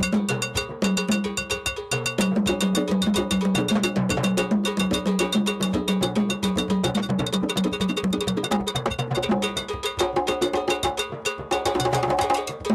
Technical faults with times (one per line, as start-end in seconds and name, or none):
6.88-9.36 time-stretched section